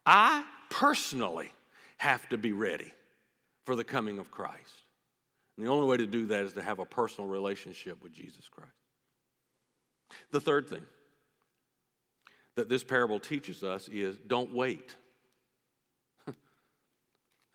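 The speech recording has no audible technical faults.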